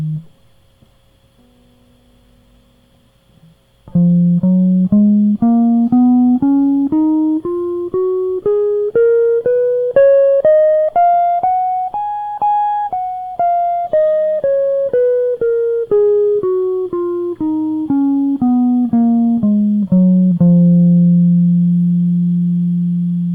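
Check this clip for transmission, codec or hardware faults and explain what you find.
Nothing in this music stood out as a problem on listening.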